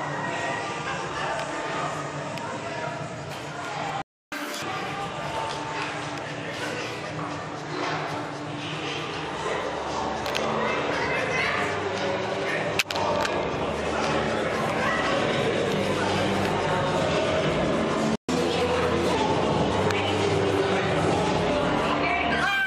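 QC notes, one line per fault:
4.02–4.32 s and 18.15–18.29 s, playback stall: the sound cuts out for 300 ms, then 130 ms, and resumes where it stopped. The player likely ran short of data.
4.32–4.62 s and 18.29–19.15 s, catch-up at higher speed: the backlog plays at 2x, then 1.15x, raising pitch by roughly ten, then two, semitones until playback returns to normal.
11.52 s, overlap between stream segments: a brief slice is trimmed at a segment boundary, so the waveform jumps and a tiny click or skip is heard.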